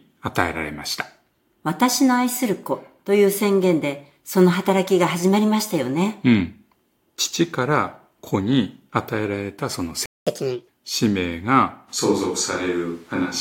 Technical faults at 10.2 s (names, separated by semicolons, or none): playback stall; catch-up at higher speed